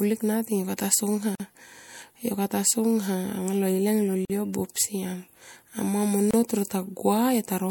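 At 1.35 s, 4.25 s and 6.31 s the speech drops into brief silence, lasting 46 ms, 46 ms and 28 ms. The second falls between "anga lo ileng lol" and "yo buop". These are gaps at a join of encoded pieces: each separately encoded segment kept its start-up delay and end padding. Unlike a packet dropout, nothing is lost or concealed. The edges are smeared by the codec, and the sound resumes exactly where it stopped.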